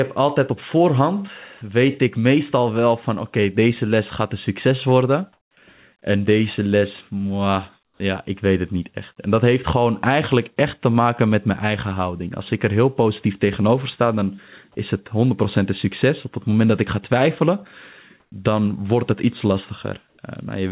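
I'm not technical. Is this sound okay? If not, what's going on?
No. In four short pauses in the speech, at 5.33 to 5.57 s, 7.85 to 8.0 s, 18.2 to 18.32 s and 20.09 to 20.18 s, the real room background is briefly swapped for a flat, artificial hiss. This is comfort noise in place of the background, likely from the call system going quiet between phrases and filling the gap with made-up noise. Unlike a dropout, the sound never goes fully silent. It simply turns smooth and featureless, and is quieter in three of the pauses and slightly louder in the one at 18.2 s.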